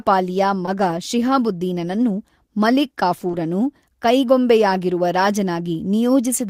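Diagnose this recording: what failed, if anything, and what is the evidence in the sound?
Network-stage short concealed packet loss at 0.65–0.69 s, 3.27–3.31 s and 3.31–3.35 s: about 20 ms each of extrapolated sound, heard as brief smears rather than the silent gaps of a hard dropout.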